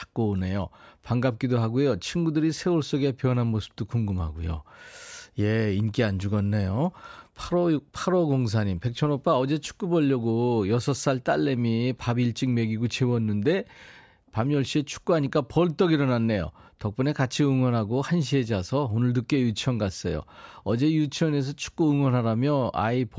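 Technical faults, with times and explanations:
No technical faults can be heard in this speech.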